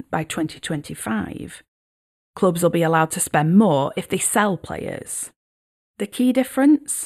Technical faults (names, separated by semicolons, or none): channel delay (comb filtering)